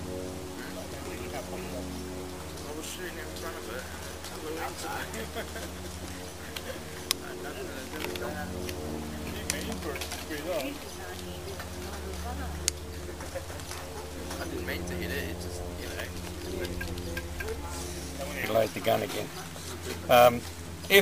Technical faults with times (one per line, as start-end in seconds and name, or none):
none